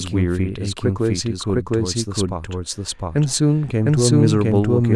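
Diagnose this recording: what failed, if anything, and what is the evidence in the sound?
The speech is heard twice throughout, which is a doubled audio track. A second full-band copy trails the first by roughly 0.7 s at about equal level. It carries no decay or room colour, so it is not an acoustic echo. The same signal is reaching the mix by two routes. The likely cause is a routing or capture stage where a slower second path records it again, or an edit holds two copies out of step.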